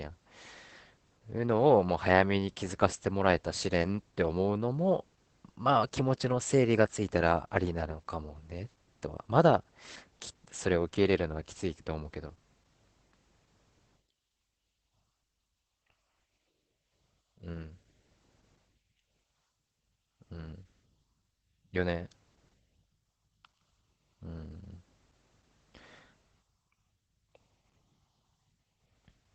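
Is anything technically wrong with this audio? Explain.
Yes. Opus voice compression runs through the whole speech clip. In SILK wideband mode the coder discards everything above about 8.5 kHz and codes the excitation coarsely, which fits roughly 12 kbps. Unlike a simple low-pass filter, it leaves the speech both muffled and hoarse, slightly robotic.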